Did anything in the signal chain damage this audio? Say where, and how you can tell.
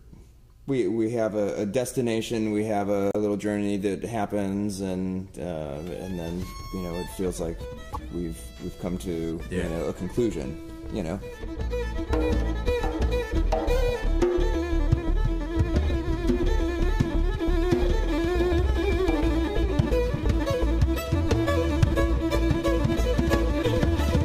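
Yes. Damaged data in the compressed stream threw the decoder off its frame sync, producing brief blips at 3.10–3.16 s and 7.93–7.97 s.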